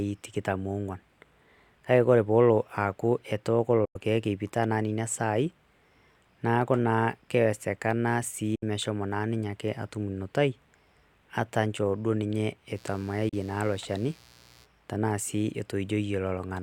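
At 3.85 to 3.96 s and again at 8.55 to 8.63 s the speech falls silent in a digital broadcast dropout. The receiver muted after losing frames, fading out over 8 ms, and those gaps fit 32 ms frames. On a waveform each appears as a flat, empty hole, and on a spectrogram as a clean vertical blank across all frequencies.

From 12.74 to 14.67 s a raspy mains buzz sits roughly 30 dB below the speech. Switching spikes at twice the 60 Hz mains rate make a spectrogram show a ladder of harmonics reaching into the kHz range. Within it, a third 32 ms dropout at 13.29 s briefly mutes the speech.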